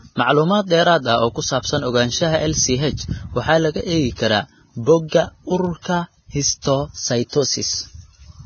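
Throughout the speech, low-bitrate lossy coding, likely Vorbis at a rate that fits roughly 18 kbps, has coarsely quantised the treble and removed everything above 6.6 kHz, leaving heavy grainy hiss and blurred consonants.

At 3.03 s, just before "waxaa laga eegi karaa", a flipped bit throws one sample off its value by a power of two and back, heard as a single sharp tick. The same bit error spike returns at 5.65 s across about three samples and at 6.42 s on a single sample.

Starting at 5.08 s, just after "waxaa laga eegi karaa", the codec spreads noise meant for a loud attack back into the quiet before it. This pre-echo is heard as a 39 ms hiss ahead of a softened onset, and it recurs at 6.62 s (21 ms) and 7.29 s (36 ms).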